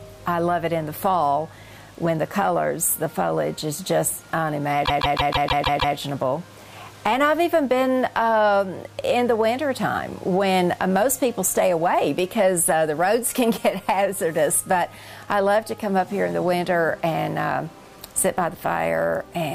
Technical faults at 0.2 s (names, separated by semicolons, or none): none